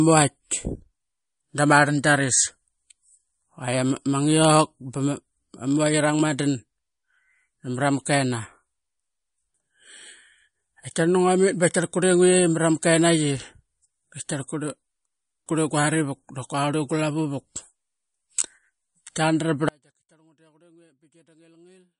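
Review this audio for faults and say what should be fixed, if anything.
Throughout the clip the speech has a watery, swirling quality, with plainly audible codec damage: sibilants turn metallic and chirpy, consonant attacks smear, and nothing reaches above 10.6 kHz. This is likely MP3 compression starved of bits, which fits a low bitrate around 40 kbps. The encoder discards weaker frequency lines that then flicker on and off between frames, and it cuts the treble at a fixed point. To prevent this, encode from the original at a much higher bitrate or deliver it in a lossless format.

At 19.69 s the speech cuts out abruptly and never returns. From there to the end, only a faint sound remains, roughly 40 dB below the normal level. This is an audio dropout to a faint residue. The sudden break, rather than a fade or a natural pause, points to a likely loss of the wanted signal upstream while the recording path after the break stayed live. 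To prevent this, secure the source connection and monitor the input level throughout the recording.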